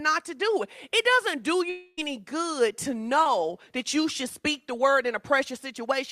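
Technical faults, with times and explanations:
1.69–1.99 s, long network dropout: right after "doesn't do", about 0.3 s of audio is lost and replaced by a fading continuation of the last sound rather than silence, with nothing left of the missing stretch; sound resumes at "good to". The length, far beyond a single-packet smear, points to a likely stall in delivery.
3.23–3.27 s, short concealed packet loss: between "good to" and "that you should speak", about 20 ms never reached the decoder and was patched by extending the preceding sound, heard as a brief smear or wobble. It is far shorter than the dropout, with no fade or lingering tail.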